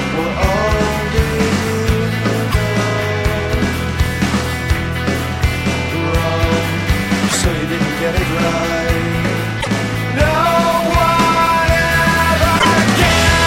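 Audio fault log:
2.50–2.55 s, 7.28–7.35 s, 9.60–9.67 s, 12.58–12.65 s: broken MP3 bit reservoir. Each event is a 50–70 ms disturbance in which the sound skips forward and is replaced by a brief chirp, noise burst or gap. That span covers two to three 26.1 ms frames, the likely result of frames dropped from the stream, so the following frames reach back into the reservoir for their borrowed bits and decode another frame's bytes.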